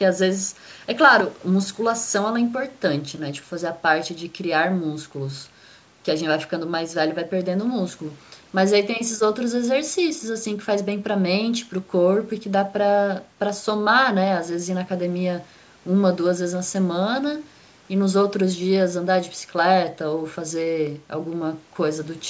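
A speech recording carries a brief, sudden dip in level from 1.21 s to 1.42 s: for about 0.2 s the sound falls by about 6 dB and then snaps back, while the band-limited call-microphone character, with nothing above 8 kHz, runs throughout. The likely cause is one channel dropping out: with one stereo side missing, the mono sum loses half of the shared content, giving that abrupt 6 dB drop.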